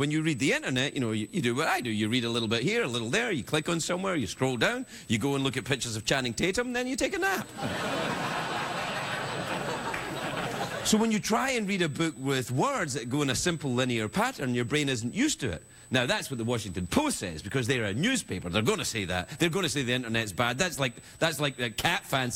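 A steady, high-pitched whine sits under the sound from start to end. It is USB whine, fixed at 8 kHz. The bus draws current in 125-microsecond microframes, and that ripple leaks into the audio. It is quiet, roughly 25 dB below the signal.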